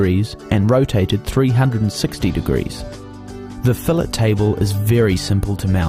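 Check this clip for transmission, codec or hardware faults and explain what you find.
No transmission, codec or hardware faults turn up in this clip.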